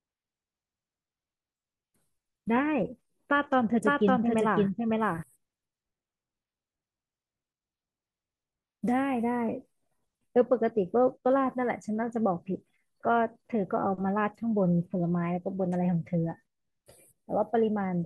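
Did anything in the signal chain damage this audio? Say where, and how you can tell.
Yes. From 3.85 to 5.23 s the speech is doubled: a dry, full-band copy at about the same level trails roughly half a second behind, with no decay, and it starts and stops abruptly. This doubled audio track likely comes from a second, slower capture path in the driver or buffer stage.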